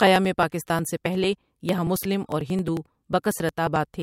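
From 0.07 s to 3.94 s the speech carries periodic USB or driver dropouts. Every 0.09 s, something blocks the audio path. Around 10 ms is skipped each time, with no silence inserted. This gives dozens of evenly spaced ticks, heard only while sound plays.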